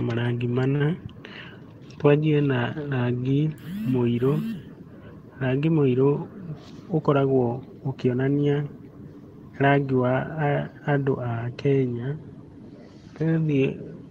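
At 0.75 s a packet arrived late and the jitter buffer ran dry, causing a short stall from a late packet. Instead of skipping ahead, the receiver stretched the last stretch of speech by 48 ms until the packet turned up, then resumed exactly where it left off. Nothing is lost, but between 0.75 and 0.83 s a sound is held unnaturally long with a faint buzzy or dipping quality, and everything afterwards plays 48 ms later.

From 6.53 to 6.74 s the jitter buffer was holding more audio than its target, and the receiver performed a jitter buffer speed-up to drain the excess. It repeatedly cut out short pitch-period-sized slices, about 50 ms in total, so this stretch plays at roughly 118% speed. The pitch stays the same, but the speech briefly sounds rushed, as if the talker suddenly hurried for a fraction of a second.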